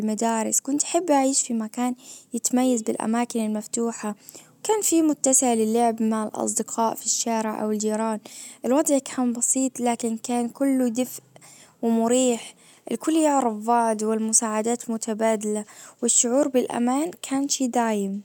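No technical faults are audible.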